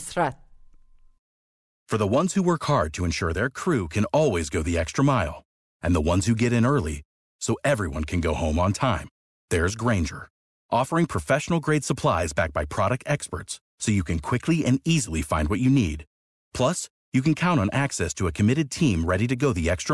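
No technical faults can be heard anywhere in the recording.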